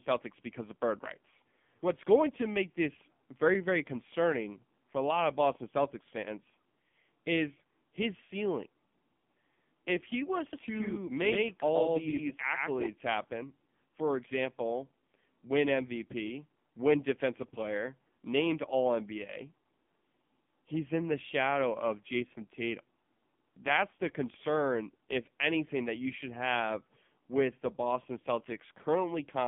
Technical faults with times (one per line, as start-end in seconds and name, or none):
0.00-29.48 AMR narrowband mobile codec
10.53-12.87 doubled audio track